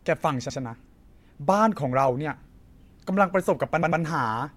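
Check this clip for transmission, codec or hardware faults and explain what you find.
One fault, repeated frames, from 3.82 to 4.02 s: a 96 ms block of compressed speech was delivered twice more, so the decoder replays it, causing a stutter that adds 192 ms.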